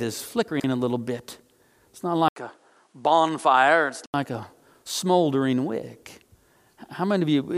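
A speech clip with two faults. From 0.48 to 0.64 s, just before "a little bit", the chunks are out of order: one 40 ms chunk lands three chunks late, so the sound jumbles briefly. A spectrogram shows three sharp vertical seams where the joins break. From 2.28 to 4.14 s, ending just before "a smoldering wick", the sound turns duller and a little quieter after an 80 ms gap, with its own faint background noise. This is likely an input switched to a poorer device. The spectrogram shows nothing above 11.4 kHz there, and the waveform shows a visible gap and a lower envelope.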